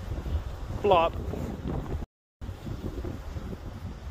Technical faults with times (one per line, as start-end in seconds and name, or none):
2.04-2.41 block of digital silence